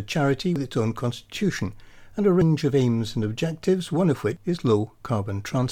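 Dropped buffers (overrun) at 0.56, 2.42 and 4.37 s, likely from the program failing to collect samples before the hardware overwrote them. Each is a jump with the speech skipping ahead, roughly a tenth of a second lost at the first two, about three tenths at the last.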